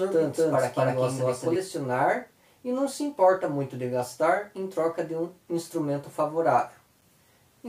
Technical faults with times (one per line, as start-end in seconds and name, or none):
0.00-1.56 doubled audio track